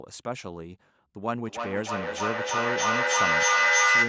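A speech clip in which, from 1.45 s to the end, each phrase comes back roughly every third of a second, thinner and ringing, the repeats stacking up rather than fading until they peak about 10 dB above the speech. This is feedback echo between two devices: a second device in the room replays the call, and the microphone recaptures it in a loop its echo canceller cannot remove.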